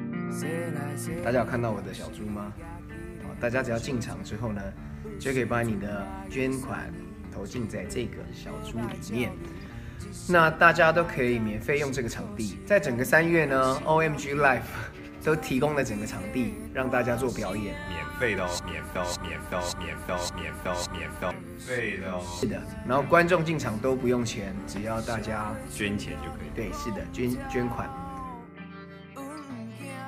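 Something upstream, likely the player, encoder or stream, stalled and kept resending the last fragment it held, producing a broken-record loop. From 18.95 to 21.31 s a 0.57 s piece of the audio repeats exactly, four times back to back, and whatever should have played there is lost.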